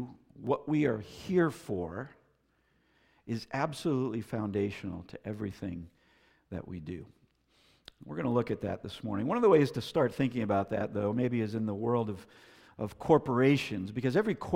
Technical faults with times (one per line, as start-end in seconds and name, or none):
0.47 dropped buffer (overrun)
10.15 dropped buffer (overrun)